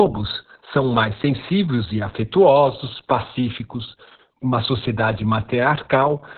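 It's a speech clip with Opus voice compression applied the whole way through, and heavily. Nothing comes through above about 4.4 kHz, so it's muffled, hoarse and a bit robotic. That narrowband SILK coding with a coarse excitation fits a starved bitrate somewhere around 6 kbps.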